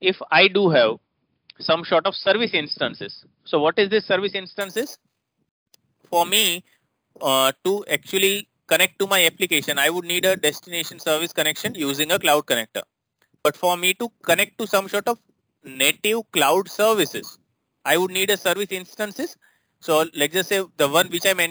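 From 4.61 s to the end, the sound carries imaging from sample-and-hold upsampling. A bright metallic fizz tracks its level, sitting about 11 dB below it. The first mirror band spans 5.5 to 11 kHz, which points to 11 kHz audio raised to 44.1 kHz without smoothing.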